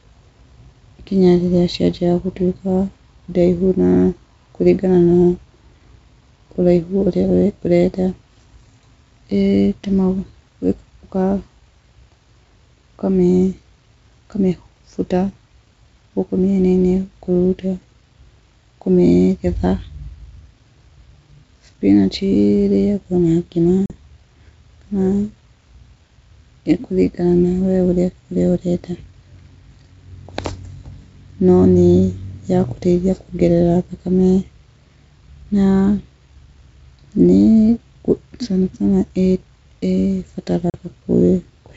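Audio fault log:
23.86 s and 40.70 s, packet loss on an ADPCM call: about 40 ms lost each time, a flat-line gap, then slightly distorted speech while the decoder's predictor resynchronises.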